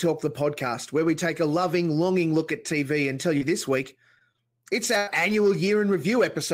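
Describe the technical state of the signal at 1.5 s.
The audio is intact at 1.5 s, with no fault present at that moment.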